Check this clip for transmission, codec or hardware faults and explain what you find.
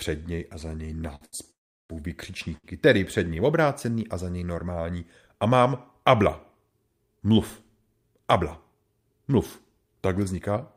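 The clip has network delivery faults: three brief stalls, one longer freeze, and one stretch of jitter-buffer speed-up. All three come from packet timing rather than codec or hardware damage.

Short stalls from a late packet occur at 1.15–1.23 s and 1.25–1.35 s, just after "něj a za něj", and again at 2.57–2.66 s. Each time a packet arrived late, the jitter buffer emptied, and the receiver stretched the last sound by 56, 77 and 66 ms. The sound is held with a faint buzz or dip, then resumes with nothing lost. These are much shorter than the freeze and have no silence.

A call audio freeze runs from 1.51 to 1.91 s, still after "něj a za něj". The receiver filled 386 ms, and about 360 ms of that is silence after a brief fading tail. The speech then continues exactly where it stopped, which points to packets likely held up in transit. A dropout would have skipped material instead.

Jitter buffer speed-up runs from 8.32 to 8.84 s, with the speech playing about 7% fast. 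Roughly 50 ms of pitch-period pieces were trimmed to shed extra delay held in the buffer. It sounds hurried but keeps the same pitch, unlike a resampling error.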